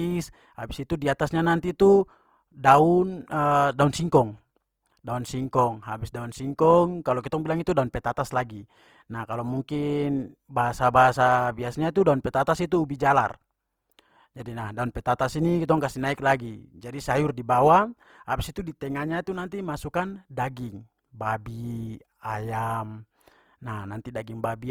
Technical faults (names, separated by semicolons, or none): Opus compression